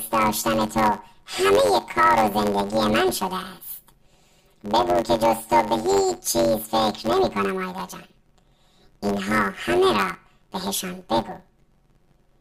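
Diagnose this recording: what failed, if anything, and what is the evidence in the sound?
Planar audio read as interleaved, at the sample-format conversion stage: throughout, the speech carries a robotic buzz near 93.8 Hz, matching roughly 10.67 ms blocks (fits 512-sample buffers), without an octave shift.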